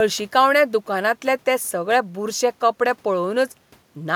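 No technical faults can be heard anywhere in this speech clip. A quiet room noise sits underneath, about 38 dB below the speech, and is simply part of the recording.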